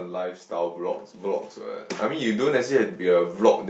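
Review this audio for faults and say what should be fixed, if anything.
Automatic gain rising, 2.09 s to 3.37 s: the automatic gain control judged the input too quiet and raised its gain by about 5 dB across that span. The speech and the background noise swell together instead of holding a steady level, heard through a call codec that cuts off above 8 kHz. To prevent it, set a proper fixed input level at the microphone, or slow or disable the automatic gain control so it doesn't ramp up mid-speech.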